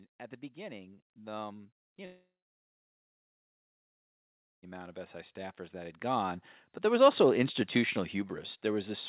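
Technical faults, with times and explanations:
0.54 to 7.24 s, automatic gain rising: Right after "at the", the level starts creeping up and keeps climbing for over six seconds, about 19 dB in all. The automatic gain control decided the input was too quiet and kept raising its gain slowly, so the speech and the background noise swell together rather than the speech alone getting louder. The slow rise is why it sounds like a gradual push and not a jump.
1.85 s, burst of packet loss: There's a short hole of about 90 ms. The receiver covered it by continuing the last bit of sound for roughly 84 ms while fading it down, so you hear a brief smeared buzz or hiss instead of real speech. When the audio picks back up, the chunk in between is simply gone, which gives a small skip in the flow.
2.05 to 4.65 s, long network dropout: Just after that burst, the sound trails off into a fading continuation and then goes quiet for about 2.3 s. 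The speech comes back at 4.65 s with roughly 2.6 s missing. The likely cause is a network outage where nothing arrived, so the receiver stretched the last sound briefly and then had only silence. Through all of this the narrow G.711 phone band, with nothing above 4 kHz, stays the same.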